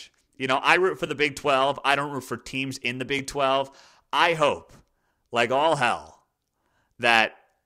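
Repeated buffer faults occur at 1.07 s, just after "know I root for", and at 3.19 s, after "for teams in the". Each time fresh audio arrived late, so one 10.7 ms block, which fits a 512-sample buffer, played twice with a hard join, giving a brief click-like stutter with nothing apparently lost.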